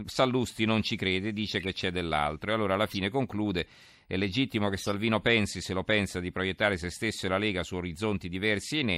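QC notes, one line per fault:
1.59–1.69 s, 2.87–2.95 s and 4.78–4.92 s: corrupt frame decoded, three short glitches where flipped bits in two or three compressed frames each got played anyway. Misread gains and codes put energy at the wrong frequencies, so each one comes out as a chirp, squeak, blip or burst of noise, peaking around -20 dBFS.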